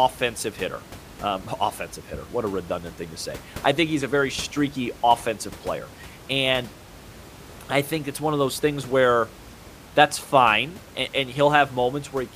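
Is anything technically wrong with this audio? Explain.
No, nothing is technically wrong with this audio.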